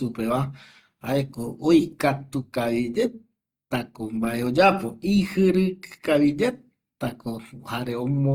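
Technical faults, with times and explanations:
Throughout, Opus compression: the speech sounds rough and grainy rather than swirly, likely CELT-mode coding at around 24 kbps filling starved bands with noise.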